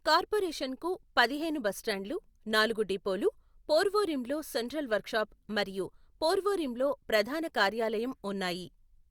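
No technical faults can be heard in this speech recording.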